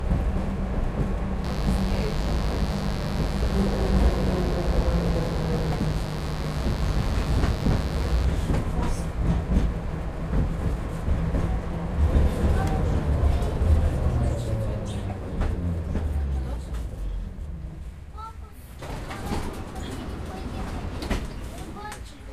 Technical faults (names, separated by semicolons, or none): mains buzz